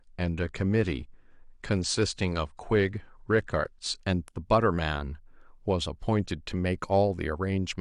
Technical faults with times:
0.00-4.00 adaptive stream starting at a low bitrate

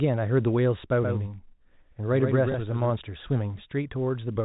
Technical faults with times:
1.02-2.90 doubled audio track
2.52-2.54 packet loss with last packet repeated

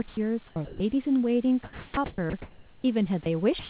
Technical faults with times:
0.08-0.17 sound dropped by the voice detector
0.47-0.80 sound chopped by the voice detector
1.64-2.84 sound chopped by the voice detector
3.23-3.26 sound dropped by the voice detector
3.59-3.69 sound dropped by the voice detector

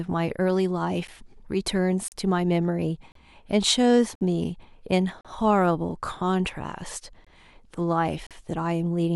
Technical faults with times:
1.07 gap between stream segments
2.08-2.12 gap between stream segments
3.12-3.15 gap between stream segments
4.15-4.21 gap between stream segments
5.21-5.25 gap between stream segments
7.25-7.27 gap between stream segments
8.27-8.31 gap between stream segments

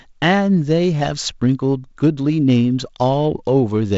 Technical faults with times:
none

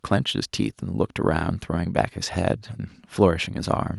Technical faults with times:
none

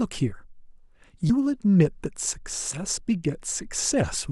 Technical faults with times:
1.29 compressed frames skipped
2.71-2.78 compressed frames skipped

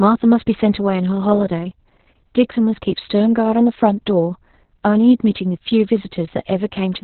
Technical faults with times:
0.00-7.04 Opus voice compression

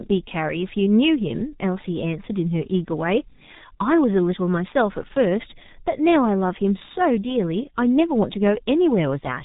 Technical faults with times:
0.00-9.44 G.723.1 codec

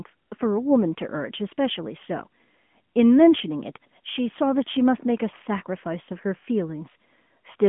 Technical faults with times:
0.00-7.69 AMR narrowband mobile codec

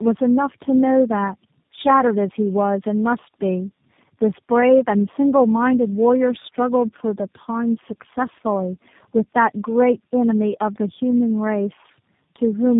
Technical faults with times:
0.00-12.79 tandem speech coding

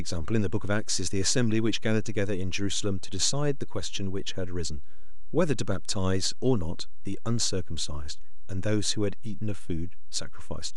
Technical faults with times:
0.00-10.76 DC offset

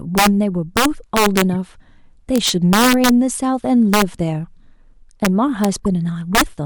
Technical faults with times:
0.18-0.27 integer overflow
0.77-1.42 integer overflow
1.53-1.55 corrupt frame decoded
2.36-3.09 integer overflow
3.94-4.02 integer overflow
5.25 integer overflow
5.64 integer overflow
5.85 corrupt frame decoded
6.35-6.41 integer overflow

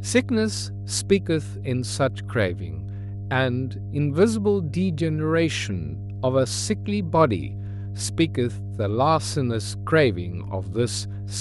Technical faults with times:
0.00-11.41 mains hum

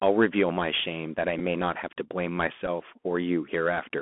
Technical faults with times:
0.00-4.01 Bluetooth CVSD headset codec
1.39 Bluetooth headset packet repeated
2.66 Bluetooth headset packet repeated

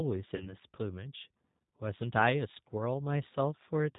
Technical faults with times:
0.00-3.98 G.729 codec
0.36-0.56 VoIP packet loss concealed by the speech codec

